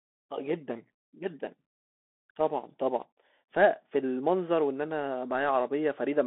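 Throughout, the Bluetooth CVSD headset codec confines the speech to 250 Hz–3.5 kHz, with nothing above 3.8 kHz. Its one-bit step tracking leaves scratchy s sounds and granular hiss.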